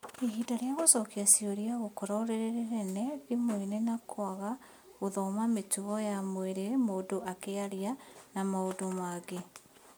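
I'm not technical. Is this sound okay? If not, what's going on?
Yes, nothing wrong can be heard in this recording.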